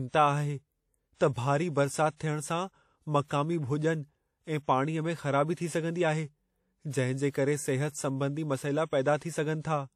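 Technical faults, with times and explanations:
Throughout: WMA compression. The speech has a ringing, washy smear around each syllable, with a hiss that swells and fades along with it. Nothing reaches above 15.3 kHz. This is likely a long-block transform codec such as WMA 1, at a level of damage that fits a bitrate near 48 kbps. Steady background hiss would sit at a constant level, but this noise rides on the speech and spreads over tens of milliseconds around it.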